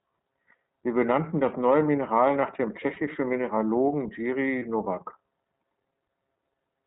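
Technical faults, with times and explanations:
Throughout, iLBC codec: the speech is confined to narrowband, with nothing above 4 kHz, so it sounds boxed-in and lacks sibilant brightness. The codec rebuilds each frame's excitation independently rather than predicting from the previous one. That costs smoothness, and the result is a plainly audible rough, slightly synthetic texture. The character fits iLBC's 30 ms frame mode at about 13.33 kbps.
2.94–2.98 s and 4.59–4.62 s, lost iLBC frames: in each spot one 30 ms frame goes missing, the first right after "nach dem". The decoder fills each hole by repeating the last pitch cycle blended with noise, so the gap comes out as a brief held, faintly buzzy vowel rather than silence. Because the next frame decodes independently, the speech snaps back to normal immediately afterwards.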